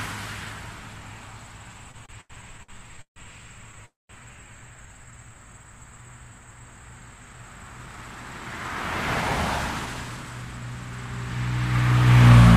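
A recording of everyday sounds carries four kinds of network timing fault. From 1.91 to 3.18 s there are repeated stalls (stutter): the receiver's jitter buffer ran dry seven times as packets arrived late, and each gap was bridged by extending the last sound, 365 ms in all and nearly a third of that stretch, the longest gap 145 ms. On a spectrogram these show as short smeared bands where the spectrum freezes horizontally, some fading toward the end, and the waveform shows repeating look-alike cycles in place of fresh detail. At 3.86 to 4.11 s comes a call audio freeze: the sound hangs for 235 ms, a continuation that quickly fades and includes about 190 ms of silence, most likely because packets were held up long enough to empty the buffer, after which playback resumes where it stopped. The spectrogram shows a brief flat streak collapsing into a blank vertical block, and the waveform thins to a flat line. 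From 4.86 to 5.35 s a jitter buffer slow-down stretches the audio to about 86% speed, adding roughly 75 ms by repeating single periods to rebuild the buffer's reserve, so events drag without any pitch change. Spectral features look horizontally stretched at unchanged frequencies, and the waveform shows runs of near-identical cycles. Two jitter buffer speed-ups follow, where the buffer held too much audio and trimmed short periods to cut the delay: 7.19 to 8.83 s at about 111%, dropping around 200 ms, and 9.37 to 10.46 s at about 108%, dropping around 100 ms. These passages sound hurried at the same pitch; on a spectrogram events sit closer together horizontally with unchanged frequencies, and the waveform shows slightly compressed spacing with tiny splice points where cycles were removed.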